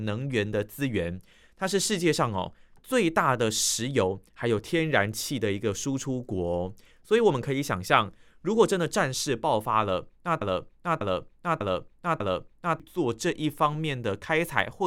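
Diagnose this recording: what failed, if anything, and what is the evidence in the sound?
A broken-record loop runs from 10.41 s to 12.80 s: a fragment of speech about 0.6 s long (596 ms) repeats exactly, back to back, four times, and the speech that should have filled those seconds never arrives. The likely cause is a stall at the playback or streaming buffer, which kept re-sending the last block it held. Unlike a stutter or a dropout, there are no gaps or partial skips. The same piece recurs identically, back to back.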